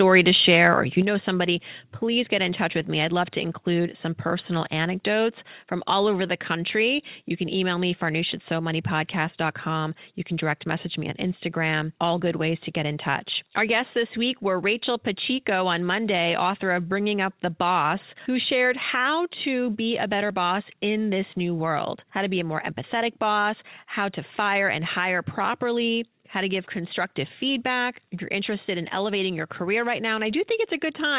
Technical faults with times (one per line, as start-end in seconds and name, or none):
1.02 microphone volume stepped down
18.93 microphone volume stepped down